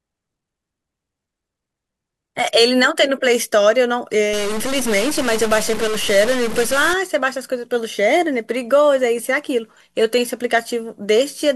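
From 4.33 to 6.93 s the speech turns harsh and buzzy, and even the gaps hiss at a fixed level near -20 dBFS. This points to a likely stuck bit. Unlike clipping, the distortion doesn't depend on loudness, because about half the samples are off by the same fixed bit weight regardless of signal level.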